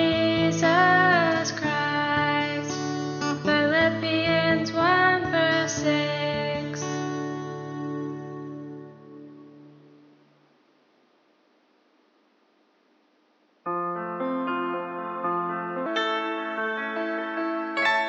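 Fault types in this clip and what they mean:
Section at the wrong speed: from 15.86 s to the end, the sound runs 1.26 times faster than recorded, so timing hurries and pitch rises by roughly four semitones together, likely from playback or editing against a mismatched clock.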